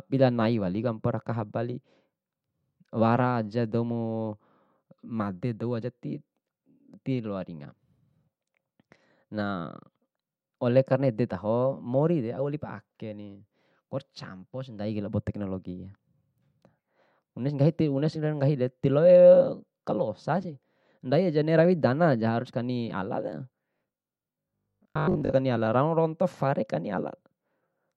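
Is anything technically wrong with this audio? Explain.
Yes. From 23.77 to 25.33 s the speech takes on a robotic sound from repeated short buffers. New audio likely arrived too slowly, so playback kept repeating its last chunk and skipped the real signal. Most of that stretch is repeated material. The repeats impose a fixed buzz at 50 Hz, which points to chunks of about 20 ms. The speech becomes a rigid, metallic drone that only loosely tracks the words.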